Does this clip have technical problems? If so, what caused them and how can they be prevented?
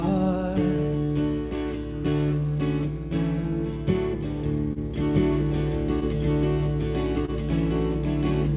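Yes. Four kinds of fault can be heard, on top of a band limit at 4 kHz that fits a narrowband call codec such as G.711.

Clock drift between sender and receiver runs through the whole clip. The sender's clock is about 1.5% slow relative to the receiver's, so the jitter buffer keeps draining. The timing wavers slightly and unevenly throughout rather than jumping at one point, which separates it from a single late packet. The fix is adaptive resampling at the receiver so it tracks the sender's clock rate.

Repeated timing corrections appear from 0.77 to 3.52 s. The receiver plays at about 99% speed, stretching the audio by about 50 ms in total to keep from running dry. The edits all push the same way, lengthening rather than cutting, which marks them as drift compensation rather than packet loss. Smoother time-stretching, spread more evenly, would hide them better.

A short stall from a late packet occurs twice, at 4.73 to 4.79 s and at 7.25 to 7.31 s. 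Each time a packet arrived late, the buffer emptied, and the receiver held the last sound for 28 ms before resuming where it left off. Nothing is missing. Instead a moment is frozen with a faint buzz or dip, unlike packet loss, where audio goes missing. A deeper jitter buffer would absorb these gaps.

A doubled audio track starts abruptly at 5.15 s and lasts to the end. A second copy plays about 1.5 s behind and about as loud as the original. It has no decay or room colour, so it is not an echo or reverb tail. The likely cause is the same signal being captured twice, with one path much slower. Routing only a single capture path into the mix prevents it.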